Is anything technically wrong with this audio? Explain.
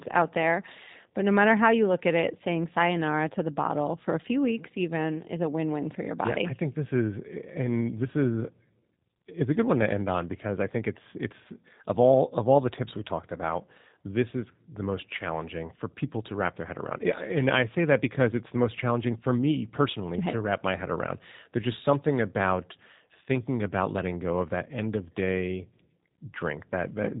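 Yes. G.729 codec damage runs throughout: speech rebuilt from a filter and sparse pulses, fitting 8 kbit/s, stops at 3.8 kHz and sounds synthetic, unlike plain band-limiting.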